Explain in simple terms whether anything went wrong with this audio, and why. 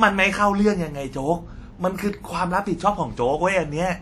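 Throughout the speech there is a ringing, washy quality, with a hiss that rises and falls along with the talking. That points to likely WMA compression: the encoder discards fine detail in chunks of sound, so smearing noise spreads around each syllable.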